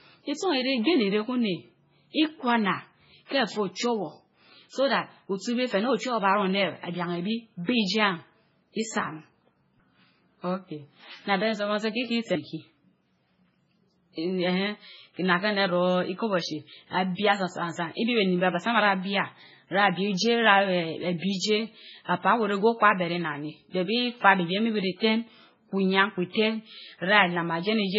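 From start to finish the speech sounds watery and swirly, and there is nothing above 7.6 kHz. These are likely signs of heavy MP3 compression at a very low bitrate, around 16 kbps. Unlike a plain low-pass filter, the weak frequency lines flicker on and off between frames.

At 3.25 to 3.31 s, a 57 ms wash of hiss arrives just ahead of a sharp onset, which then sounds blunted. This pre-echo comes from quantisation noise spread across the whole transform block. Unlike reverb, it precedes the attack rather than trailing it.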